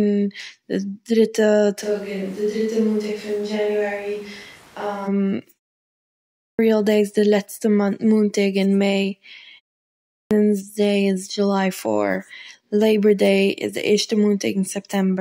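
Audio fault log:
1.84–5.06 s, switch to a distant microphone: the speech abruptly turns roomy and hollow, thinner in the bass and about 5 dB quieter, with room noise rising to roughly 25 dB below the speech. This is likely a fallback to a farther pickup. On a spectrogram, low frequencies thin out and a raised noise floor fills the gaps; the waveform steps down at the start and back up at the end.
6.14 s and 9.83 s, clipped start after a pause: after pauses of 0.63 s and 0.31 s, the output device seems to need time to wake, so about 0.45 s and 0.48 s of sound are lost. Speech then starts abruptly with its opening missing. The waveform and spectrogram show a hard onset out of silence with no gradual rise.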